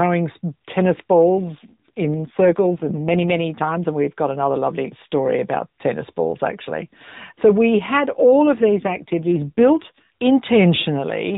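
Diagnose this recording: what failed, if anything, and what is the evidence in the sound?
The failure is an AMR rate drop at the network stage, heard twice: 1.34 to 3.50 s, and 8.36 to 10.05 s, just after "we had". The narrowband speech turns buzzier and more synthetic, with no gap. That fits the codec falling from 12.2 to 5.9 kbps on a weak link.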